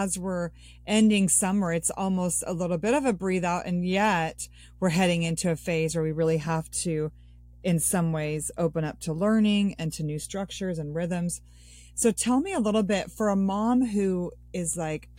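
Speech with mains hum running through the whole recording: a steady 60 Hz tone sits under the voice at roughly 25 dB below the speech level. It comes from power-line current leaking into the signal, either through a ground loop or from a nearby transformer.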